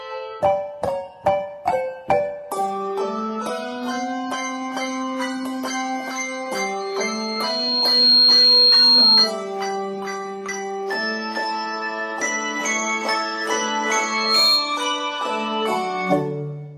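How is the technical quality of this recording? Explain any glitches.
The recording is marred by loudspeaker feedback squeal, twice. From 6.80 to 9.34 s a pure tone near 4.2 kHz swells over about a second and a half. It ends up roughly 10 dB louder than the audio. It returns from 13.99 to 14.87 s, rising faster, in about 0.4 s. A microphone is hearing its own loudspeaker. At 4.2 kHz the loop gain tops one, so that tone keeps feeding itself until the amplifier limits it or the loop breaks.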